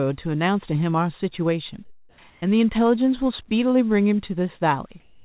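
From 1.85 to 2.18 s the background turns into a flat, featureless hiss about 4 dB quieter than the real room sound. It is comfort noise in place of the background, likely because the sender stopped transmitting during the pause and the receiver synthesised noise shaped roughly like it. The same smooth, slightly dropped hiss returns from 2.3 to 2.42 s. At 2.4 s the sound bursts in abruptly, its soft start missing: an onset clipped by the voice detector, which was likely slow to register that sound had resumed, so about 20 ms went unsent and comfort noise filled the gap. From 5.0 s to the end the background again becomes a steady, detail-free noise, this time about 1 dB louder than before. Throughout, nothing reaches above 4 kHz, which fits a narrowband G.711 call codec on the path.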